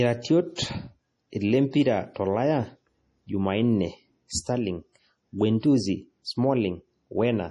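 A speech recording with heavy codec damage throughout. It sounds watery and swirly, and nothing survives above 11.2 kHz. The likely cause is MP3 compression at a low bitrate, around 32 kbps.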